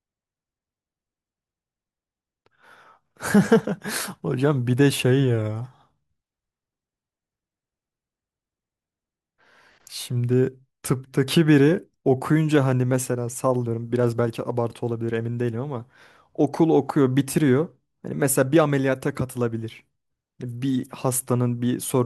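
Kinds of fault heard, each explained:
Nothing stood out as faulty on listening to this speech recording.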